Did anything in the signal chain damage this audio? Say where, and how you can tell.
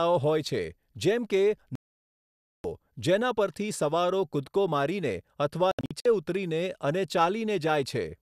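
Yes. The damage happened at reception and decoding: the speech shows a digital broadcast dropout. From 1.75 to 2.65 s the sound mutes completely and resumes at "જેના પરથી સવારો કૂદકો" with about 0.89 s of programme missing. This fits a long run of frames that failed their checks. After "સવારો કૂદકો મારીને અથવા", the stretch from 5.71 to 6.06 s holds several short holes totalling 192 ms, the longest 72 ms. The receiver silenced each bad frame. On the waveform these appear as flat silent gaps, and on the spectrogram as empty vertical blocks with sharp edges.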